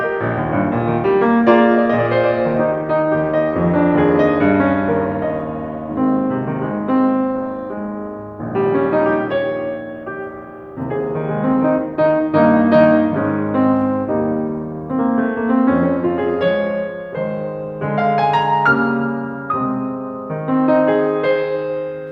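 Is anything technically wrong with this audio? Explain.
No, nothing in this music recording stands out as a technical fault. There is nothing to flag.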